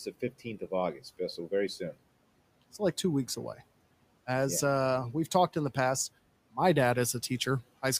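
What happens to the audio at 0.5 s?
From 0.05 to 0.72 s the speech sounds swallowed and faint, dropping by up to about 14 dB. This is speech cut by the noise suppressor, which mistook quiet parts for background noise.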